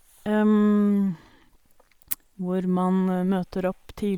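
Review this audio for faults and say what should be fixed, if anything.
Bluetooth LC3 compression damage is plainly audible throughout the speech. Its upper spectrum sounds grainy and breathy, as if noise replaced detail. This likely comes from an LC3 link, consistent with about 48 kbps in 10 ms frames. Record over a wired path or a higher-bitrate link.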